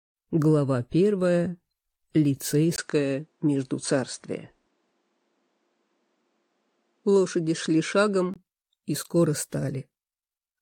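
At 2.76 s there's a 20 ms dropout, then the top end is gone, with nothing above 9.4 kHz and a faint new hiss underneath, at about the same level, until 8.36 s. That's likely the input switched to a poorer device and back.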